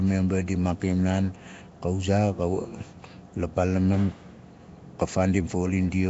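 From start to finish, the speech has likely been through Nellymoser compression, the Flash-era microphone codec, at a rate the sound suggests is around 32 kbps. With few bits shared across each short block, weaker bands go uncoded and are replaced with noise. The result is plainly audible: a rough, hissy halo around the speech and a smeared, underwater quality, with nothing above 7.7 kHz.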